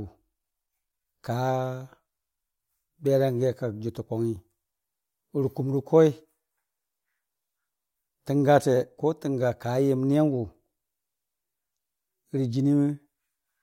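Speech recording with no audible technical faults anywhere in the clip.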